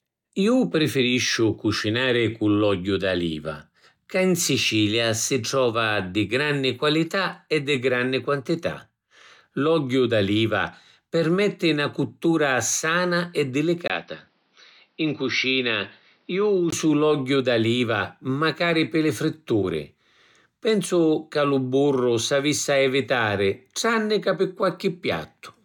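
From 13.88 s to 16.72 s, after "na cuttura sana e" and until "l’ogghiu d’aliva macari pi", the speech turns duller, with nothing above 5.9 kHz, which points to the likely cause: the input switched to a poorer device. Unlike a filter or codec dropping bandwidth, the change arrives with a 20 ms silence at the switch and a faint new background noise, while loudness stays about the same. The full band returns abruptly at 16.72 s.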